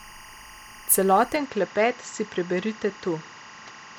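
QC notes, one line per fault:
throughout, timecode bleed: a chirping warble sits about 25 dB under the speech, flipping between pitches near 1 kHz and 2 kHz, which fits 24-frames-per-second linear timecode leaking in. Unlike a steady whine or hum, it keeps toggling with a clocked rhythm.
1.36 s to end, input switched to a poorer device: the sound turns duller and boxier, with nothing above 7.6 kHz, a drop of about 5 dB, and new background noise around 30 dB below the speech, with no gap at the change. The cause is likely a switch to a lesser microphone or headset. A simple EQ or filter change would not alter the level and noise floor at the same moment.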